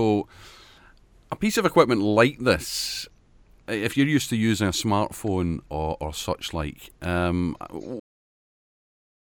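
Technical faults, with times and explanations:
8.00–9.38 s, cut-off end: speech stops dead mid-sound after "or such like um"; final buffers never written, so waveform flatlines to digital silence, spectrogram goes blank without decay.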